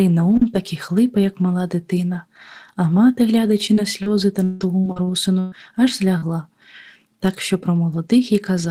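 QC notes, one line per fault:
3.73–3.80 s, 4.03–4.09 s and 6.18–6.25 s: short concealed packet loss. Right after "дитина а мати глядачи", then twice more, about 40 ms of audio failed to arrive in time. The decoder bridged each hole by extending the preceding sound, pitched where voiced and as shaped noise where not, then crossfaded back. About 32 ms was synthesised in the first two cases and 38 ms in the third, which produces a brief smear or wobble in place of the real signal.
3.77–3.79 s, 4.06–4.08 s and 6.22–6.24 s: lost packet rebuilt from error correction. Inside each of those concealed spans, one 20 ms packet was recovered from the low-bitrate redundant copy that Opus in-band FEC carries in the following packet, so there is no gap at those points. Because the copy is coarsely coded, these frames sound rougher and noisier than the surrounding audio, which adds a short grainy patch to each glitch.
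4.44–5.55 s: repeated packet loss (robotic sound). Across this 1.1 s stretch, five separate gaps removed about 400 ms in total, the longest 162 ms. Roughly 390 ms was filled by extending the preceding signal, about 35% of the span, with around 70 ms of it rebuilt from FEC copies. Each patch is followed by another gap soon after, so the audio comes through choppy, with pieces missing.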